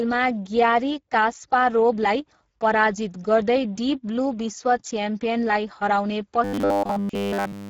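Right from the start the whole clip carries Speex codec damage: the speech sounds hoarse and grainy, and the thin excitation is what you'd expect from a rate somewhere near 10 kbps.

From 6.44 s to 7.69 s it turns into robotic sound from repeated short buffers, a rigid metallic buzz at 100 Hz that still loosely tracks the speech. That's likely a 10 ms chunk being replayed over and over while all the real audio in that stretch is skipped.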